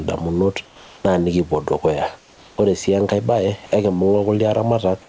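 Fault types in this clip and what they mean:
Gain pumping: The background rises in every gap and sinks under each loud stretch of speech, a swing of roughly 10 dB, so loud and soft passages sit unnaturally close in level and the speech sounds squashed. The likely cause is input gain set far too high, with a fast limiter or compressor clamping down on each peak. Steady room noise holds one level, but this background breathes in step with the speech.
Comfort noise in place of the background: From 0.66 to 1.04 s and from 2.18 to 2.58 s, the real background, which sits about 27 to 30 dB below the loud parts, is swapped for a smooth, featureless hiss about 3 dB quieter, lasting 380 and 400 ms. This is likely discontinuous transmission, where the sender goes silent in pauses and the receiver fills them with synthetic noise. Pumping makes the level swell and duck, but here the texture of the background changes abruptly.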